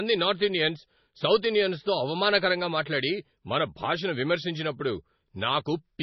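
Speech throughout the clip sounds dull and watery, with swirly, chirping s sounds and smeared onsets, and nothing at all above 5.9 kHz. This is likely heavy MP3 compression at a very low bitrate, around 24 kbps, cutting the treble and dropping weak frequency detail.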